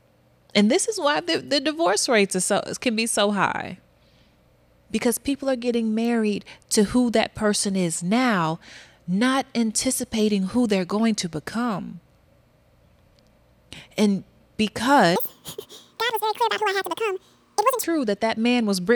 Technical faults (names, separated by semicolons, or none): section at the wrong speed